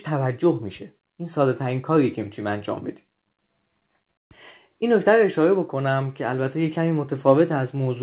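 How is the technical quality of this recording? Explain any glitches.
No glitches are audible in the speech; the band stops at 4 kHz, which points to a narrowband call path such as 64 kbps G.711 mu-law, and that limit is simply the character of the channel rather than a defect.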